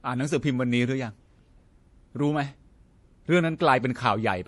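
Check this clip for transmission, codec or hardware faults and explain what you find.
One fault runs through the whole clip, and it is likely MP3 compression. Nothing remains above 11.4 kHz, where the encoder cut the treble to save bits, which fits a bitrate around 48 kbps. Weak frequency lines switch on and off between frames, giving speech a plainly audible watery, swirly texture and metallic chirps on s sounds.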